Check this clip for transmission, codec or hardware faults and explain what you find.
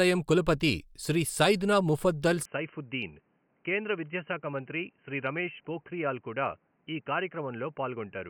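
One fault is present. From 2.45 s to the end, after "కులపతి శ్రీ సైద్నా ముఫద్దల్", speech turns dull and boxy, about 5 dB quieter and cut above 3.1 kHz, with new background noise. The likely cause is an input switched to a poorer device.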